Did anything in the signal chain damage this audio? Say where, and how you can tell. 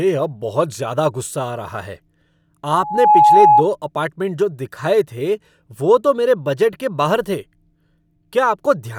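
Yes, there's loudspeaker feedback squeal in the analogue path: an 840 Hz tone swells in under half a second, from 2.73 to 3.64 s, sitting roughly 10 dB over the speech, before "अपार्टमेंट जो दिखाए थे". The mic was hearing its own loudspeaker.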